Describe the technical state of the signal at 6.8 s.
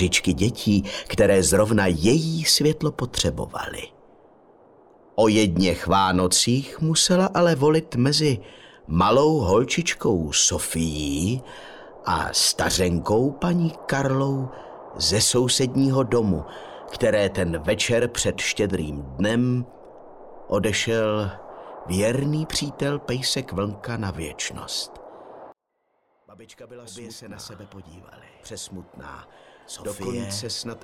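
Nothing at 6.8 s points to a technical fault; the signal is intact at that moment.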